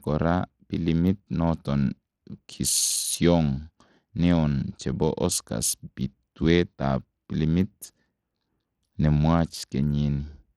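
Throughout the speech, treble flickers and drops out under gritty quantisation noise, likely Bluetooth SBC compression starved of bits, as a low bitpool near 80 kbps would cause.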